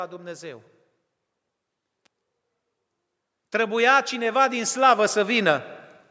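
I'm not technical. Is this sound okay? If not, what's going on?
No, there are two problems. At 2.06 s there is an electrical switching spike, a sharp snap lasting only a few thousandths of a second and sitting on top of the speech. This is likely caused by something electrical nearby, such as a switch flipping, a motor starting or a small static discharge. The audio cable or circuit picked up that tiny burst of interference and turned it into a click.

From about 3.5 s to 5.7 s you can hear automatic gain rising. The device's automatic volume control decided the input was too quiet and slowly turned itself up. Over those two seconds the speech and the background swell together and end up clearly louder. It sounds as if someone slowly turned up a volume knob partway through the recording.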